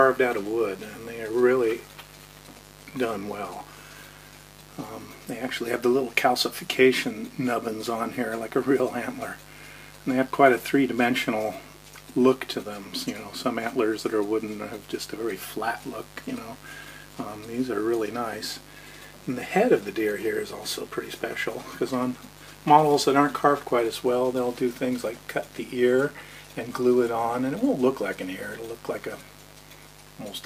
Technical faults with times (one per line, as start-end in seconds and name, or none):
0.00-30.45 mains buzz